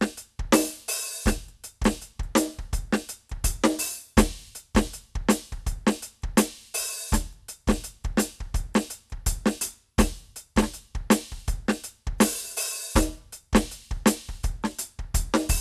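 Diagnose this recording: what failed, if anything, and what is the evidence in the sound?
Nothing failed; the music shows no audible technical fault.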